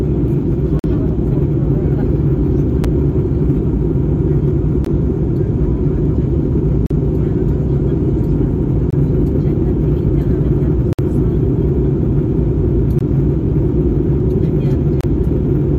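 Gaps between stream segments occur at 0.79–0.84, 2.84, 4.85, 6.86–6.91, 8.90–8.93, 10.93–10.99, 12.99–13.01 and 15.01–15.04 s. They come at every 2 s segment boundary, where mistimed joins leave 6–58 ms hard-edged silent dropouts. On a spectrogram they show as clean vertical blank strips, and on the waveform as abrupt flat-line cuts.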